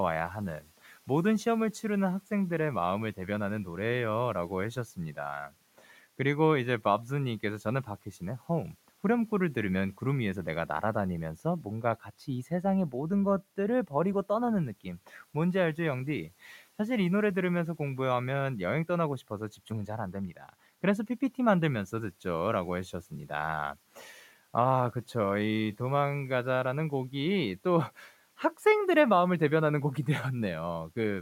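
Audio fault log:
20.12–20.54 s, speech cut by the noise suppressor: within this span, roughly 200 ms of the speech is pulled down, by about 12 dB at the deepest point, so the affected sounds come out swallowed and faint. The suppressor mistook these softer parts for background and attenuated them along with it. Unlike a dropout, the sound thins rather than vanishing outright. The room noise, about 29 dB below the speech, is part of the recording itself.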